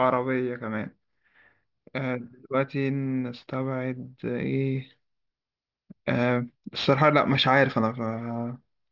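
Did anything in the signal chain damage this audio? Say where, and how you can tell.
Yes, aliasing from a sample-rate conversion stage that downsampled without an anti-alias filter. The damage runs through the whole clip. The speech is band-limited at 6 kHz, which fits a drop from 48 kHz to 12 kHz. Content that should have been removed above 6 kHz has folded back below it, sitting roughly 20 dB under the speech. Sibilants come out gritty and metallic, and the spectrum stays dense right up to that 6 kHz edge.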